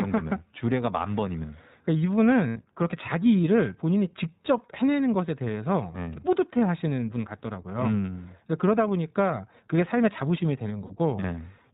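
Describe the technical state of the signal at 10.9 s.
Right at 10.86 to 10.92 s there's a short dropout from lost iLBC frames. About 40 ms goes missing, which fits two 20 ms frames. The decoder fills the hole by repeating the last pitch cycle blended with noise, so you hear a brief held, slightly buzzy vowel. The speech snaps back almost immediately because each frame decodes on its own.

Underneath that, the whole clip carries plainly audible iLBC codec coloration, with the sound pointing to the 15.2 kbps, 20 ms frame mode. It's narrowband, so nothing above 4 kHz survives, and the speech comes through intelligible but a bit rough and synthetic from the frame-by-frame excitation coding.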